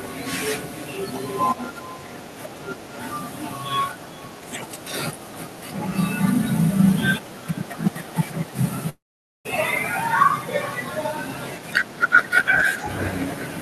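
Echo with no canceller runs through the whole speech clip: the far end's loudspeaker feeds its microphone and nothing removes the pickup, so each phrase returns roughly four tenths of a second later as a thin shadow about 23 dB below the talker.

A long network dropout, likely, occurs from 8.89 to 9.47 s. About 0.56 s of audio never arrives. The receiver stretches the last sound into a fading buzz, then roughly 0.47 s of near-silence follows before speech resumes further on, with the gap lost.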